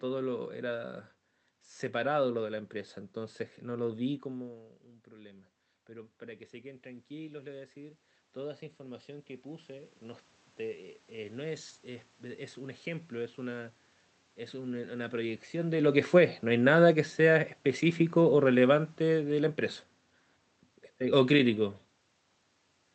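From 15.65 to 19.57 s, automatic gain falling lowers the level by about 5 dB. Unlike a talker moving back, the room noise sinks along with the speech.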